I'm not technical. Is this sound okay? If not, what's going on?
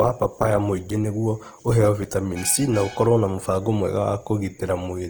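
No, not quite. All the way through, the speech has a rough, grainy texture, as if a fine hiss is stuck to every sound, and the clearer tones come out noisy rather than clean. The top end is still there, so it isn't muffled. What you're hearing is most likely Opus compression squeezed a bit too hard: when it runs short of data, it fills the gaps with borrowed or made-up detail, and that's where the grit comes from.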